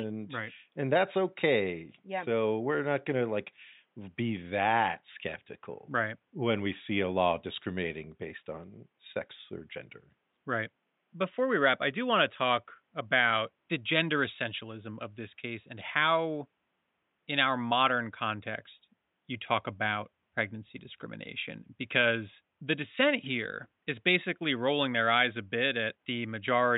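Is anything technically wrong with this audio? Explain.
No, nothing is technically wrong with this audio.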